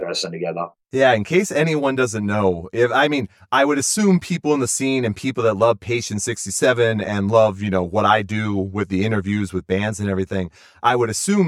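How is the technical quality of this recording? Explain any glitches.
The recording has one persistent fault, channel delay (comb filtering), present across the whole speech clip. One channel runs roughly 10 ms behind the other, and when the two are mixed to mono, components common to both cancel at regular intervals. The first notch sits somewhere around 50 Hz, with further notches repeating about every 100 Hz above it. The voice comes out hollow and phasey. A spectrogram shows evenly spaced dark horizontal stripes that stay fixed throughout.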